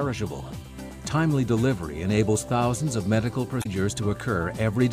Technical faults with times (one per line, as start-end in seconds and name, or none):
3.59-3.66 damaged data in a compressed stream